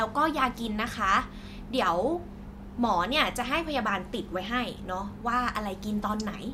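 No technical faults can be heard anywhere in the recording.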